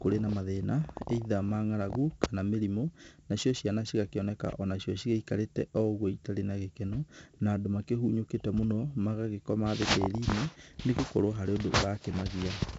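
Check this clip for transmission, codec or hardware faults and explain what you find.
One codec fault runs through the whole speech clip. 4-bit ADPCM compression, throughout: each sample is coded as a coarse adaptive step from a prediction. The result is gritty hiss riding every loud syllable, with roughened attacks, and nothing above 7.8 kHz, which fits a 16 kHz stream of about 64 kbps.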